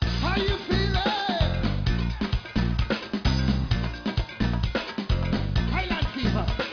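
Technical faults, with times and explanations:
Nothing here stands out as a technical fault; the audio comes across without any problems worth noting.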